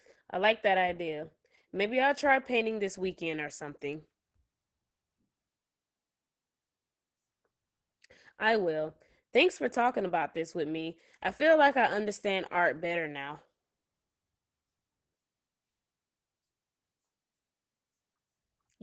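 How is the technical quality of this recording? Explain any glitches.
Muffled, hoarse and faintly robotic speech throughout, with nothing above 8.6 kHz. This is Opus voice compression at a very low rate, and the damage is heavy. The cut-off at 8.6 kHz fits Opus holding to wideband, and the coarse, buzzy texture points to the SILK linear-prediction coder working at roughly 10 kbps. At that rate the excitation is coded too crudely to keep natural breathiness, so the voice sounds rough and synthetic.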